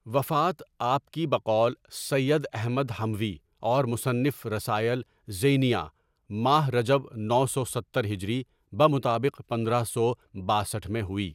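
No technical faults can be heard anywhere in this speech recording. Nothing in the audio calls for a time mark or an explanation.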